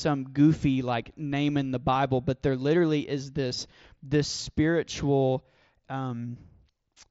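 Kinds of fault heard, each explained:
Concealed Bluetooth headset packet loss: single 7.5 ms packets were lost at 0.50 s and 3.50 s and filled with a repeat of recent waveform, so both are nearly hidden. A waveform shows a short copied cycle, and a spectrogram shows a barely visible seam.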